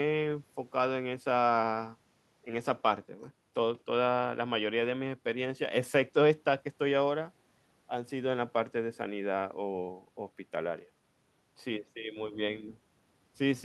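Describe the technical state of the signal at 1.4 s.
At 1.4 s the speech signal is intact, with no dropout, clipping, glitch or other fault audible at that point.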